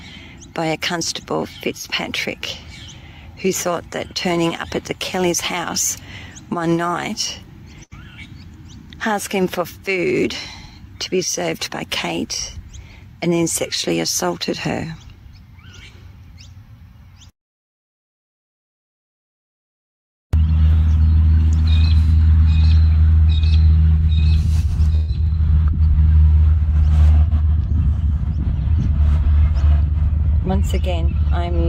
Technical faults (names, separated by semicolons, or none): burst of packet loss